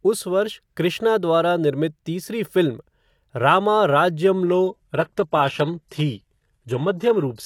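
At 4.46 s the speech switches abruptly, without a gap, to an adaptive stream at a lower bitrate, cutting everything above 12.3 kHz.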